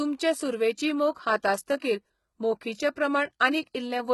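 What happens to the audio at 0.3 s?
At 0.3 s the speech carries HE-AAC compression damage, present throughout the clip. Nothing reaches above 11.8 kHz. The treble is likely rebuilt from copied lower bands, which fits a low bitrate around 16 kbps. Sibilants sound gritty, metallic or lispy.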